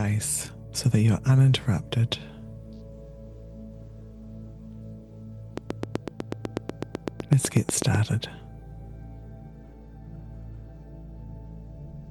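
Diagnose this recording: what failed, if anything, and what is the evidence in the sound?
A steady ticking runs over the sound from 5.58 s to 7.96 s: a train of clicks at a regular 8 per second, around twenty in all, each much the same sharp pop and peaking roughly 15 dB above the surrounding audio. The even spacing and similar shape point to a repeating external pulse. It is likely interference coupling into the analogue wiring from nearby equipment, though a struggling interface injecting periodic glitches would produce the same pattern.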